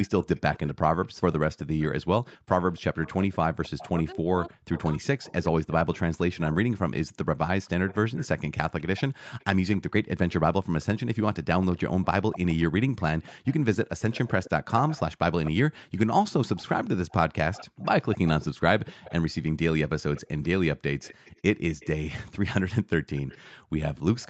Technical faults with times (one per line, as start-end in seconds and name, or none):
0.03-5.96 echo leak
3.93-7.06 speech suppressed in double talk
7.16-9.78 echo leak
10.81-19.13 echo leak
20.15-21.88 echo leak
23.16-24.30 echo leak